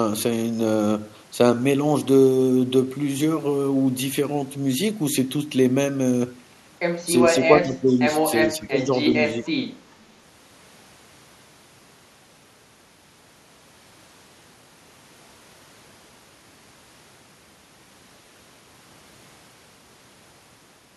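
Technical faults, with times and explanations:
7.24–7.42 s, 7.62–8.13 s, 8.48–8.92 s and 9.34–9.48 s: speech suppressed in double talk. The voice dips by about 5 to 15 dB in pieces, likely because an echo canceller turned down the talker while the other side spoke.
9.91–9.96 s: echo leak. A brief, very faint scrap of the voice returns about 393 ms late, at about 40 dB below the speech, likely loudspeaker echo that the canceller failed to remove.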